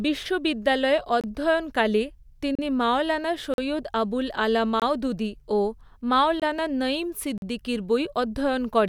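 At 1.21, 2.55, 3.54, 4.80, 6.40 and 7.38 s the speech drops into a block of digital silence, 21 to 43 ms each, as output buffers went unfilled, which fits 1024- and 2048-sample buffers at 48 kHz. Each hard cut gives a short hole.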